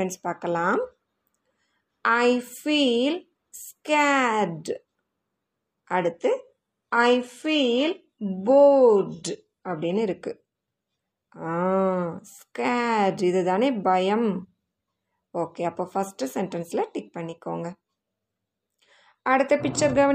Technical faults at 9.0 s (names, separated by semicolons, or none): adaptive stream at a lower bitrate